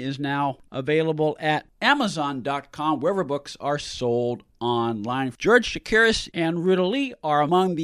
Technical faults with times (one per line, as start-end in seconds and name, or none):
none